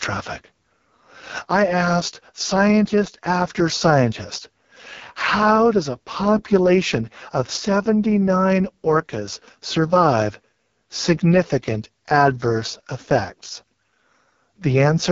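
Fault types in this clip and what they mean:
AMR wideband (HD Voice) codec: The speech runs through a pulse-excited vocal tract model that fakes the top band with shaped noise, and here it comes out rough and raspy throughout, with nothing above 7.5 kHz, which fits the codec's lowest 6.6 kbit/s mode.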